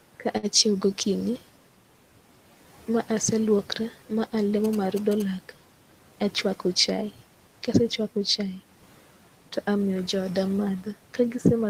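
A speech recording with four technical faults. Throughout, a noise suppressor is cutting the bands it judges to be steady noise by about 12 dB, frame by frame. These noise suppressor artifacts make the room noise, sitting about 20 dB under the speech, sink in the gaps and rise again beneath the voice. From 0.37 to 0.46 s, just before "acjhiewo go okinyi", a packet arrived late and the jitter buffer ran dry. The receiver held the last sound for about 56 ms until the packet came, then carried on from the same point. This short stall from a late packet loses nothing, but one sound hangs on too long with a faint buzzy dip. From 4.64 to 5.22 s, right after "ma aseluokora ma", a nearby 2G phone sent GSM signalling bursts that the audio circuit rectified. They produce a galloping dit-dit-dit of short 217 Hz buzzes at about 10 dB below the speech. From 6.47 to 7.03 s, a jitter buffer speed-up trims short pitch-period slices to shed roughly 50 ms of backlog, so the speech runs about 9% fast at unchanged pitch and sounds hurried.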